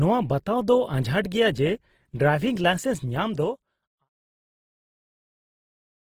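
Opus compression runs through the whole speech clip, with plainly audible damage. The sound is rough and grainy, with bands refilled by folded or noisy content. Content still reaches about 20.2 kHz, which fits the likely music mode at roughly 16 kbps. The fade-out near the end is smooth.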